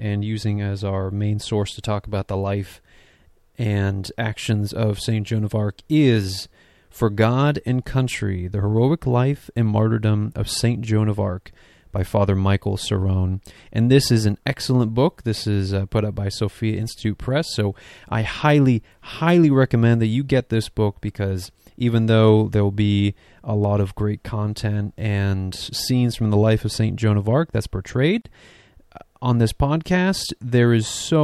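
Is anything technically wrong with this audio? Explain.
Yes. At 28.22 to 28.25 s, right after "that's portrayed", there is a gap at a join of encoded pieces. Separately encoded pieces were spliced with their encoder delay and final-frame padding untrimmed, leaving a gap of roughly 37 ms with smeared edges. Unlike a dropout, the speech resumes exactly where it stopped, with nothing lost.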